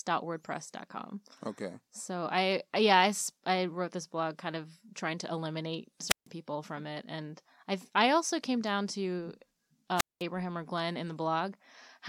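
A burst of hiss, then near silence, opens at 6.08 s after "of trying to eliminate" and lasts to 6.27 s (a 149 ms mute) before "people from it". Again at 9.96 to 10.23 s (203 ms mute). These are wireless microphone squelch dropouts: the fading radio signal tripped the receiver's squelch.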